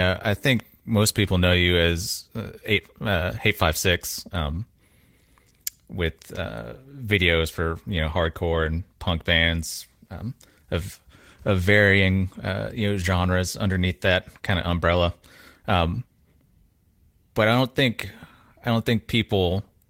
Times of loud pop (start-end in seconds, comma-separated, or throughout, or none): 0.60-0.62